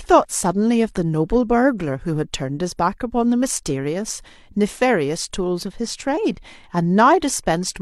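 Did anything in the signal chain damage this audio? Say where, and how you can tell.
No, nothing in the signal chain damaged this recording.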